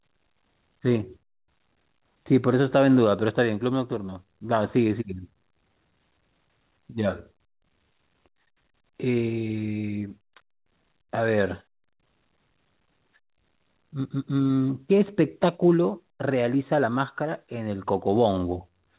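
A speech recording carried over a WebRTC call path whose narrowband sound, with nothing above 4 kHz, fits a 64 kbps G.711 A-law telephone codec working as intended, and no technical fault can be heard anywhere in it.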